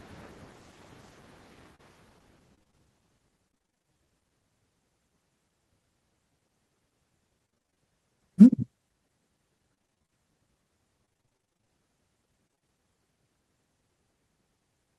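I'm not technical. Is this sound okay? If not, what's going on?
No, not quite. It's speech, and the network connection is clearly struggling in a few spots.

At about 1.75 to 1.81 s there's a short concealed packet loss. Roughly 40 ms of audio didn't arrive in time, so the receiver faked it by stretching out the last bit of sound. You'd hear a tiny smear or wobble, and a quick sound might just vanish.

The bigger issue is repeated packet loss (robotic sound), at 2.55–2.75, 3.49–3.86, 7.46–7.78, 9.74–10.14, 11.06–11.70 and 12.48–12.63 s. Each stretch has a rapid run of dropouts around 20 ms long, and about half of each stretch is patched-in filler. That's why it goes choppy, with bits missing.

Right after the second bad patch, from 3.87 to 4.06 s, there's a jitter buffer slow-down. The receiver was low on buffered audio or had just raised its target delay, so it quietly repeated tiny slices to build a reserve. 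Playback drops to about 84% speed at the same pitch, so the sound drags a little.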